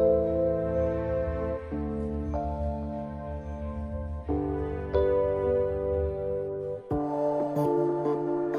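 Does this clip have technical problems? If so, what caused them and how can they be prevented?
No, nothing stood out as a technical problem on listening to this clip.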